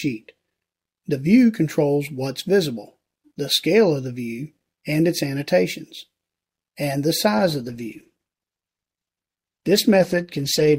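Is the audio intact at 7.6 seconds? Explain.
No. From 7.38 s to the end, the audio sounds rough, watery or muffled, with the highs cut off, and it never clears. This is a call bitrate drop: the encoder was forced to code more coarsely, which fits a fall from 96 kbps to about 14 kbps.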